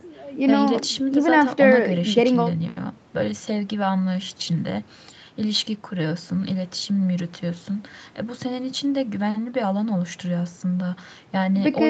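No faults: the speech sits within a call-codec band with nothing above 8 kHz, and the microphone high-pass trims only the lowest bass, both normal for a call path.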